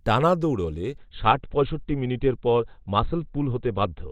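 At 0.98 s the speech abruptly changes in quality, with a swirly, watery codec texture rising, and it stays that way to the end of the clip with no gap at the switch. This is an adaptive stream at a lower bitrate: the player dropped to a cheaper version of the stream when the connection slowed, and the sound fits Opus falling from 64 kbit/s to around 12 kbit/s.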